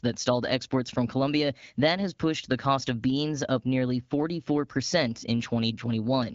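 Nothing goes wrong anywhere in the speech here; it's carried over AMR wideband (HD Voice) at 12.65 kbit/s, so the top end stops at about 7.4 kHz.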